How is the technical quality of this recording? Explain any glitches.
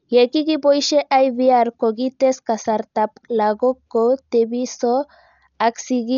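The technical quality is poor, with heavy codec damage across the whole speech clip. Dolby Digital compression, likely the cause, runs throughout: at what sounds like a bitrate near 48 kbps, the encoder drops everything above 7 kHz and starves many frequency lines of bits, which the decoder fills with noise. The result is dull, muffled speech with a rough, fluttering grain.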